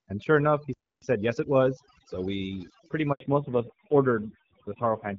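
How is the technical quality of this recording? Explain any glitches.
Technically it's rough: heavy processing all the way through, plus a stall, a hurried stretch, a dropout and a drop in bandwidth late on.

Overdone noise removal runs throughout. The suppressor was set too hard, so it's gating bands near its noise estimate and taking quiet speech detail with them. You get a near-silent background with twinkly specks.

At 0.74 s there's a playback stall. The audio cuts out mid-flow for about 284 ms, then carries on. That's likely the player running dry or getting blocked.

Right after "sure enough he", from 1.02 to 2.14 s, there's a time-compressed catch-up. The player trims its backlog by splicing out small chunks, so the speech runs about 1.25 times fast at normal pitch.

After "we pretty", at 3.12 s, there's a handover gap of 80 ms. The call switched networks and no frames arrived, so the voice fades to silence and a bit of speech is lost.

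From 3.20 s to the end, the call falls back to narrowband. Nothing above 4 kHz is left, and the voice turns duller and rougher, which points to a low-rate narrowband codec replacing the HD Voice stream. Before that point the AMR wideband (HD Voice) codec shows only light coding damage.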